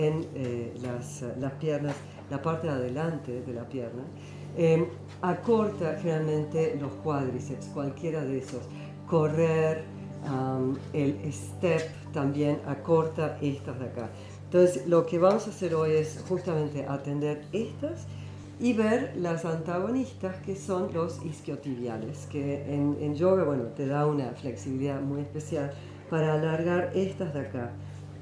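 No technical fault can be heard anywhere in this audio. There is nothing to mark at any point in time.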